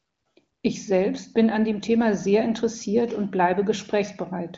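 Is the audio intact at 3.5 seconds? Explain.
Yes, the audio is intact at 3.5 seconds: the speech there comes through the AMR wideband (HD Voice) path with its usual band limit of about 7.2 kHz and no fault.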